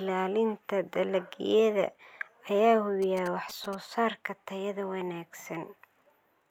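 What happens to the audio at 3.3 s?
At 3.3 s the speech is overlaid by GSM signalling bursts, running from 3.02 to 3.75 s. A 2G phone close by is sending brief groups of radio bursts while it signals to the network. The audio circuitry rectifies that radio energy into sound. The result is a galloping dit-dit-dit of short buzzes at 217 Hz. It sits about 15 dB below the speech.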